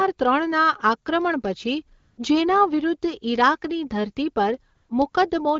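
AMR comfort noise fills three gaps, at 1.99–2.17 s, 4.75–4.89 s and 5.11–5.13 s: the sender stopped transmitting speech frames and the receiver substituted synthetic noise. Each gap sounds like a smooth, steady hiss and shows on a spectrogram as a flat, featureless band.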